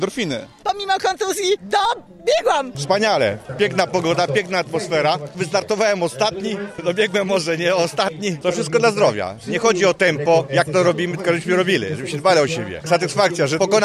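No technical faults can be heard anywhere in the audio. Nothing in it calls for a time stamp or an explanation of what went wrong.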